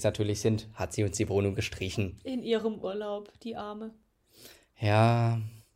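A speech clip with a burst of processor overload crackle from 3.89 to 4.18 s. The processor kept missing its deadlines for buffers of roughly 3 ms, about ten in all. Each miss drops in a hard-edged slice of silence. On a waveform these show as short flat gaps, and on a spectrogram as thin vertical broadband streaks.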